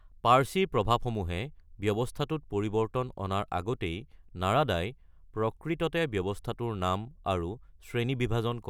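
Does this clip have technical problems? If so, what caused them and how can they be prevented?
No, nothing in this clip needs fixing or preventing.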